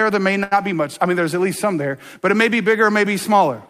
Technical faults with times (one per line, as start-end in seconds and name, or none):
0.43-0.53 short stall from a late packet